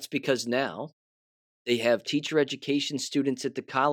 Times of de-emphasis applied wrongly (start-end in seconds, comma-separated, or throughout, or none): 1.96-3.92